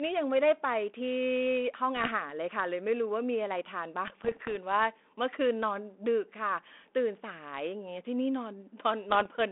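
Speech over a G.726-style ADPCM line, carrying bit errors on an ADPCM link at 1.97–2.11 s, 4.07–4.55 s and 9.10–9.26 s: pops and rough bursts as corrupted bits knock the decoder's step size and predictor off track.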